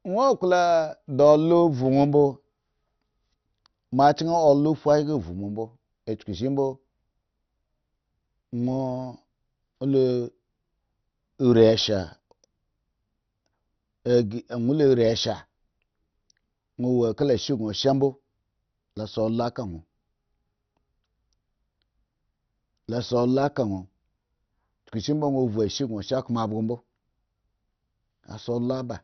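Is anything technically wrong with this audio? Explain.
Yes. Throughout the speech, the sound is dull, with nothing above about 6.2 kHz, and carries a gurgling, granular distortion. This is likely heavy MP2 compression: starved of bits, the encoder switches off upper sub-bands and coarsely quantises the rest, which suggests a rate near 48 kbps.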